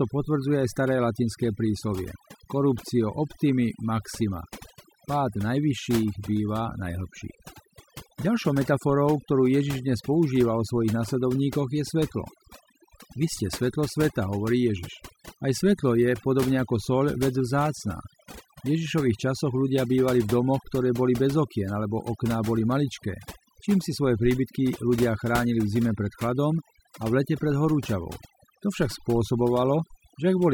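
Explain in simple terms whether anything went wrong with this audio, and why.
Something did go wrong, and it lasts the whole clip. This is overdone noise removal. A cleanup tool was set too strong. It cut away quiet parts of the speech along with the background noise. The gaps sound quieter, with twinkling specks.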